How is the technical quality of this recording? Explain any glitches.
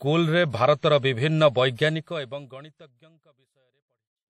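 The speech carries plainly audible codec damage from start to finish, with a smooth fade-out starting around 2 s and finishing at 4.3 s.

WMA compression, throughout: the damage most likely comes from this transform codec, which fits a bitrate around 48 kbps. Its quantisation noise smears across tens of milliseconds and nothing survives above 16.7 kHz, leaving a ringing, washy quality with hiss that breathes along with the speech.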